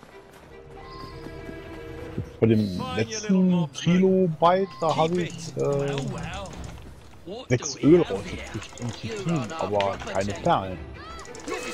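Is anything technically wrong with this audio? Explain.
No, nothing technically wrong can be heard in this audio.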